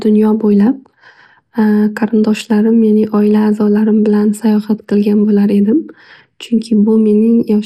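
From start to finish the speech sounds dull and muffled, with a gurgling, granular roughness clinging to it and the top end flickering in and out. This is likely MP2 compression: the encoder divides the signal into 32 sub-bands and, short of bits, drops whole upper bands while quantising the remaining ones coarsely. The plainly audible damage fits a low bitrate, around 80 kbps.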